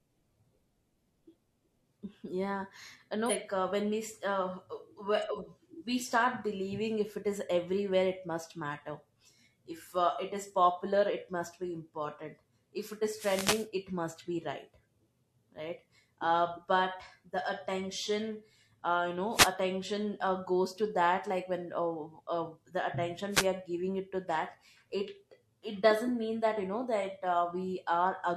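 At 3.25 to 3.32 s the speech jumps forward: compressed frames were skipped. Roughly four consecutive frames never reached the output, so about 200 ms of audio is missing. The jump is consistent with frames of about 46 ms. The speech simply resumes further along.

From 13.15 to 13.68 s there is a wireless microphone noise hit. The FM radio link faded as reflected signals cancelled, receiver noise rose, and a swish of static is heard for about half a second. Two shorter hits of the same kind follow, at 19.31 to 19.54 s and at 23.31 to 23.47 s. Each is a brief burst of hiss lasting a fraction of a second.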